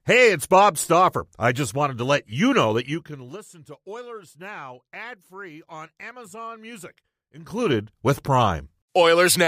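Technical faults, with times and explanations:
2.77–3.48 s and 7.36–7.77 s, zipper noise: a rapid ticking rides on the speech after "to let you know" as the level falls by about 20 dB, and again as it rises about 20 dB. The gain moves in unsmoothed 2 dB jumps, and each jump clicks.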